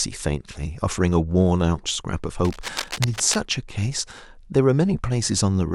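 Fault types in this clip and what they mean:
Cable scratch noise: from about 2.45 to 3.36 s there's a dense, uneven scratchy rustle over the speech, fairly loud at roughly 10 dB below it. That's likely a worn cable or connector being moved, so its contact resistance flickers and sprays bursts of noise.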